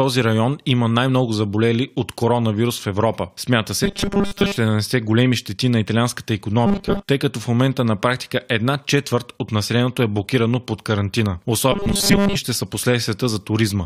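Audio likely arrived too seldom, so the last 5 ms kept being replayed while most of the real sound was skipped. The result is robotic sound from repeated short buffers, a rigid, metallic 200 Hz buzz loosely tracking the speech at 3.84–4.56 s, 6.66–7.09 s and 11.72–12.35 s.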